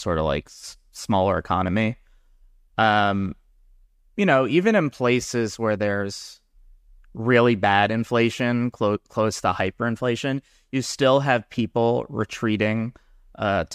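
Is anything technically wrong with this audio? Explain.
No, nothing is technically wrong with this audio.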